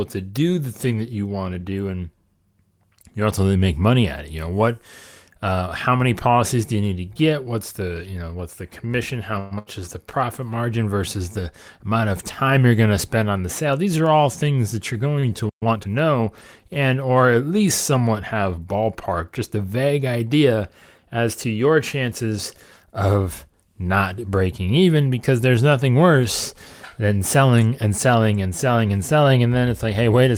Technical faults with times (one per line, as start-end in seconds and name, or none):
9.39-9.54 call audio freeze
9.59-9.81 burst of packet loss
13.24-14.26 jitter buffer speed-up
15.20-15.30 short stall from a late packet
15.49-15.63 playback stall
15.63-15.87 time-compressed catch-up
22.05-22.38 jitter buffer speed-up